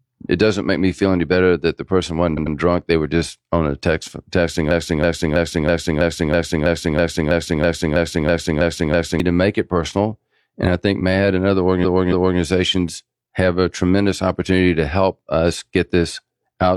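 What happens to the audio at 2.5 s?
Right after "better that the person", from 2.33 to 2.51 s, the audio hits repeated frames: a roughly 93 ms block of compressed audio is decoded two more times, which fits two duplicated frames. It is heard as a stutter, and the repeat lengthens the speech by 185.8 ms.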